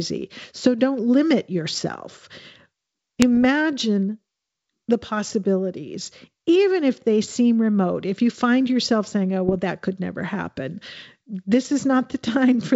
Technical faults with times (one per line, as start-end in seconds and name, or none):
3.22-3.44 bit errors on an ADPCM link
9.47-9.56 bit errors on an ADPCM link